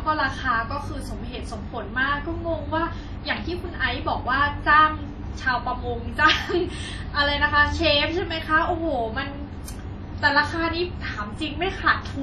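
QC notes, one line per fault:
Throughout: heavy damage that is likely WMA compression, with ringing, washy speech and a hiss that breathes with the voice. Nothing lies above 13.7 kHz, and the smeared transform noise sets it apart from a plain low-pass.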